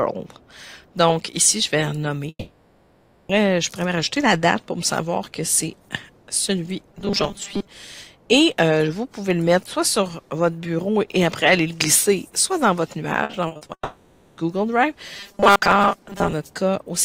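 A long network dropout runs from 2.29 to 3.31 s. The last sound is stretched into a fading buzz, then about 50 ms of silence, and roughly one second of audio is gone when it resumes, likely because the stream stalled.

From 6.93 to 7.68 s, robotic sound from repeated short buffers imposes a rigid, metallic 200 Hz buzz. This is likely from audio arriving too seldom and a short chunk being replayed, which fits a 5 ms buffer. About half the passage is repeated material.

Repeated packet loss (robotic sound) follows from 13.23 to 13.71 s. Six gaps, the longest 60 ms, are each patched by continuing the last sound. About 200 ms is lost and roughly two-fifths of the stretch is concealed, so the audio turns choppy and robotic.

Immediately after, a second long network dropout spans 13.73 to 14.39 s. A fading tail and about 70 ms of silence replace roughly 0.64 s of missing audio, likely a renewed network stall.

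From 15.17 to 16.33 s, robotic sound from repeated short buffers returns with the same 200 Hz metallic buzz, likely from starved buffers being replayed, with about half the span repeated.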